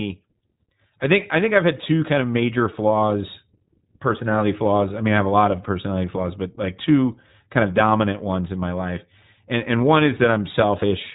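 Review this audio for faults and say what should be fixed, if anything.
iLBC codec, throughout: each 20 ms frame is coded independently, leaving nothing above 3.8 kHz and plainly audible rough, synthetic speech. Prevent it by using a wideband codec at a higher bitrate.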